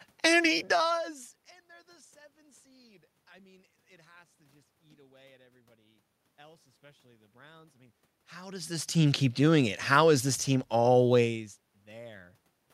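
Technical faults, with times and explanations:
No technical faults can be heard in this speech recording; the level shifts and background sound present come from the recording itself rather than from any problem in the signal chain.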